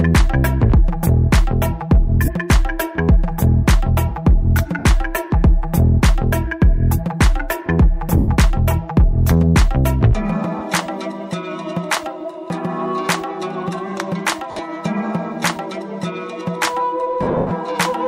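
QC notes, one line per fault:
2.25–2.28, 4.79–4.85, 8.17–8.28, 10.59–10.61, 14.51–14.59, 17.23–17.51 s, lost LE Audio frames: the Bluetooth link dropped 30, 60, 110, 20, 60 (scattered over 80 ms) and 200 ms (scattered over 280 ms), fitting 10 ms frames. The LC3 decoder refilled each gap with the last spectrum at random signs, so tonal content becomes a brief noisy smear that fades on the longer losses.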